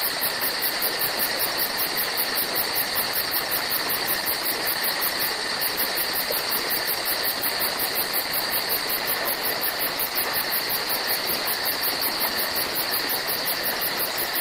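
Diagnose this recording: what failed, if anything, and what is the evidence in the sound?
Nothing in this recording points to a failure at any stage of the chain. There is no audible event to tie to a time or trace back to a mechanism.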